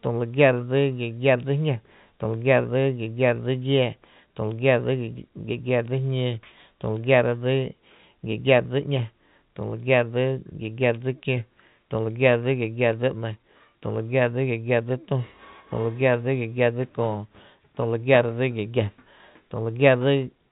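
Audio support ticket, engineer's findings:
No faults found in this speech.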